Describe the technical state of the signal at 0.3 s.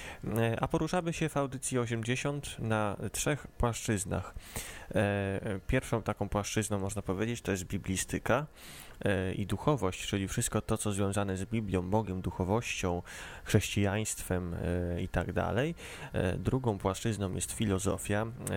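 At 0.3 s the signal is intact, with no dropout, clipping, glitch or other fault audible at that point.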